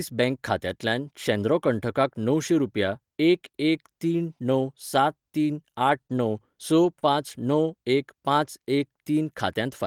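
It's a speech clip with a cluster of packet-loss damage between about 5.9 and 7.0 s. The lost packets rebuilt from error correction sit at 5.87–5.89, 6.09–6.11, 6.17–6.19, 6.83–6.85 and 7.01–7.03 s, each a 20 ms frame. The decoder fills each one from the lower-bitrate copy carried in the following packet, so nothing drops out, but those slices come through grainier and noisier. Twice, at 6.07–6.09 and 6.99–7.01 s, there's short concealed packet loss. About 20 ms simply never arrived, so the receiver stretched the preceding sound over the gap, giving a quick smear or wobble, before the error-correction copy took over for the next frame.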